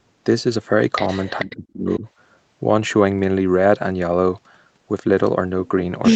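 At 1.39 to 1.56 s there's an echo leak: a faint copy of the speech trailing by 436 ms, roughly 20 dB under the main talker. It's likely a loudspeaker on the far end whose echo canceller let some of its mic pickup slip back down the line.

Overlapping that, from 1.42 to 2.07 s, the speech is suppressed in double talk. The talker dips by as much as about 30 dB in choppy pieces, adding up to around half a second. Both sides were likely talking at once, so the canceller clamped down on everything.

A second, fainter echo leak shows up at 1.92 to 1.99 s, again 436 ms behind and way down, maybe 35 dB below the speech.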